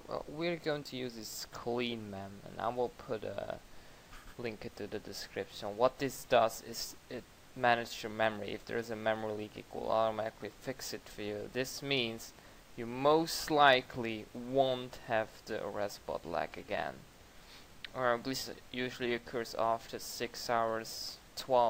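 No technical faults can be heard anywhere in the clip. Nothing in the audio points to a problem in how it was captured, processed or delivered.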